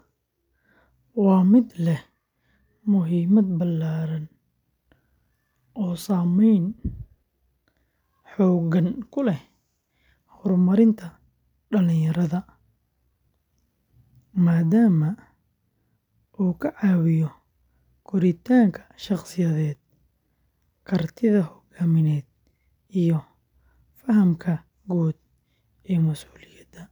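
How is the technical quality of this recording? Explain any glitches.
No glitches can be heard in the recording. The speech runs without any technical fault that needs explaining.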